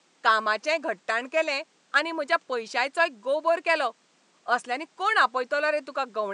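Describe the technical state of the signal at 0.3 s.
At 0.3 s the speech signal is intact, with only the room's own background noise sitting about 39 dB below the voice.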